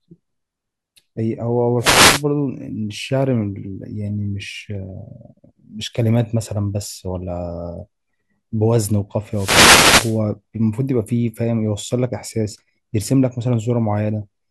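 Wireless microphone noise hits break into this speech clip at 1.79 to 2.24 s and again at 9.31 to 10.20 s. Each is a burst of static as the analogue FM radio signal fades, letting receiver hiss surge.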